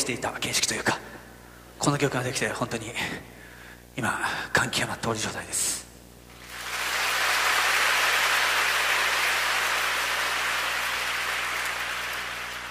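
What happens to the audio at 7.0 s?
At 7.0 s, as throughout the clip, a screen or video cable is coupling into the audio path, producing video or display buzz. The picture's field scanning at 59.94 Hz leaks in as a steady buzz at that rate with hash above it, and the line scanning adds a very high tone at 15.7 kHz. The interference sits around 20 dB below the wanted audio, so it stays audible beneath it at that moment.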